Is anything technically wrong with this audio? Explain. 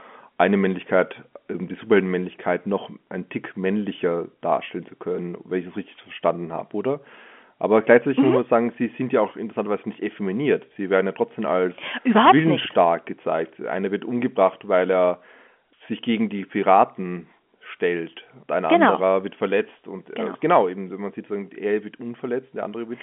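No, nothing stood out on listening to this speech, which comes through the narrow telephone band expected of an ordinary fixed-line call.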